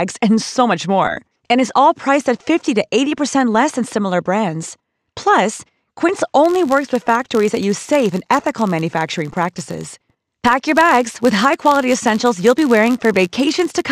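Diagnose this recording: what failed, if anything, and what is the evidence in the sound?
Filter restarted on every block, from 6.44 s onward: a level-following 86.1 Hz buzz shows a buffer-stage filter resetting per block, fitting 512-sample blocks.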